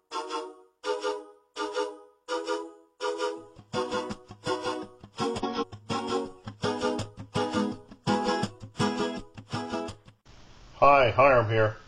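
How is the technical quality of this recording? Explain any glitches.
There's one glitch. From 5.24 to 5.64 s you get frames out of order: two neighbouring blocks, each about 186 ms, which fits roughly four frames apiece, got swapped before decoding. That stretch plays with its halves exchanged, a garbled flutter, and no time goes missing.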